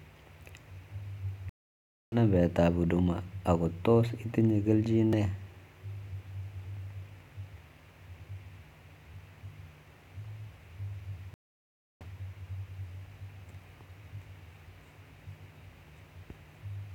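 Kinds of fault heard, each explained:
Stream reconnect: The link dropped, playback went silent, then a new decoder picked up mid-stream, twice here. Near 1.49 s about 0.63 s of silence gives way to "numbek ab huduma ako", resuming roughly 0.7 s later in the stream. At 11.34 s about 0.67 s of silence ends with audio restarting 200 ms earlier, so a stretch repeats. On a waveform each shows as a flat gap, then a muted or faded onset.
Block of digital silence: A run of samples was replaced by silence, likely because the output buffer wasn't filled in time. Just after "ako tos itinye kelchin", at 5.13 s, a 1.9 ms hole cuts in and out without any fade, so it sounds like a brief tick. On a waveform it is a tiny flat line with abrupt edges; a spectrogram shows a thin vertical broadband stripe.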